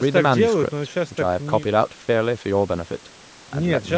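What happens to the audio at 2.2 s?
Nothing goes wrong at 2.2 s; the speech passes through the call's microphone processing intact there, with its lowest bass trimmed as expected and no content above 8 kHz.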